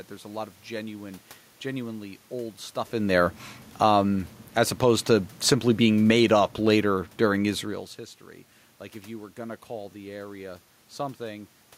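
From 5.95 to 7.65 s, automatic gain falling lowers the level by about 4 dB as the gain control reacts to an input it judges too loud or too noisy. Unlike the talker moving, here the room noise sinks together with the speech, which gives the control away.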